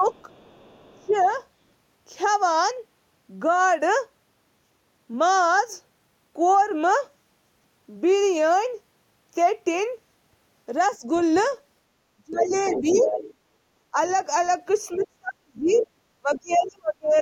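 Right from the start, 0.0 to 1.26 s, there's speech suppressed in double talk: the level dips by up to about 25 dB in patches, likely the echo canceller ducking everything while both sides talked. Over 0.04 to 1.3 s, a faint trace of the other side's voice leaks through, about 35 dB under the speech. Another brief dip of about 15 dB hits at 10.99 to 11.08 s. From 11.15 to 16.67 s the leak gets loud, only about 10 dB below the talker, likely loudspeaker echo the canceller failed to remove. Over that stretch the talker gets chopped again, at 12.16 to 13.97 s (down about 25 dB) and 14.96 to 17.15 s (down about 35 dB, roughly a second and a half lost).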